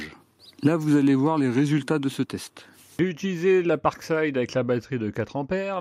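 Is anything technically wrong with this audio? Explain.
No, nothing technically wrong can be heard here.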